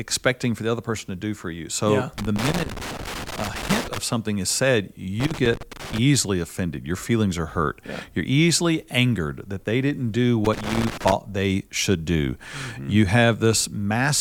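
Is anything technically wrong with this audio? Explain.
Yes. Irregular bursts of crackle and scratching break up the speech from 2.18 to 3.98 s, just before "something is said", from 5.20 to 5.98 s, just after "something is said", and from 10.45 to 11.12 s, between "that they didn't do" and "they should do". This is loose connector crackle: a worn or dirty contact keeps making and breaking, chopping the signal.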